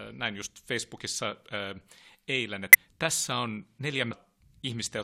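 Speech with brief glitches at 0.45–0.48, 2.73–2.75 and 4.08–4.12 s, from damaged data in a compressed stream: corrupted frames make the decoder lose sync.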